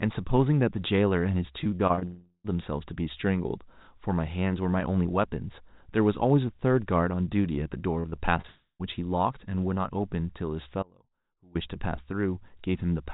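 From 1.64 to 2.03 s, packets go missing again and again. This repeated packet loss leaves six short gaps, the longest about 33 ms, each patched by stretching the last sound. About a third of that span is filled in this way, so the speech turns choppy and robotic. Straight after, from 2.05 to 2.46 s, the sound smears into a decaying buzz, falls to 60 ms of silence, and returns with roughly 380 ms missing, likely a long network dropout.

The same pair returns later. Repeated packet loss runs from 8.0 to 8.46 s, with five gaps up to 39 ms making the speech choppy. Then from 8.48 to 8.81 s comes another fading buzz and 110 ms of silence, with about 320 ms of speech gone, again likely a long network dropout.

From 10.83 to 11.55 s the speech cuts off abruptly mid-flow. For about 0.72 s only a faint trace remains, around 30 dB below its normal level, before the speech returns just as suddenly. 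This is an audio dropout to a faint residue: the wanted signal was likely lost while the path after the break stayed live.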